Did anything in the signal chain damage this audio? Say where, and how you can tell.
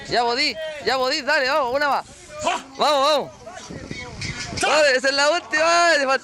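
Yes. A resampler restarted on every block runs from 0.42 to 3.26 s in the sample-rate conversion stage, upsampling 24 kHz to 48 kHz. Each 20 ms block is converted in isolation, so every edge lacks real neighbouring samples, producing a 50 Hz buzz that follows the signal.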